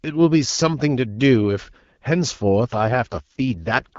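At 2.74 s an AMR rate drop sets in and lasts to the end, the speech turning rougher and more synthetic, which fits a fall from 12.65 to 6.6 kbit/s with the same band and no gap.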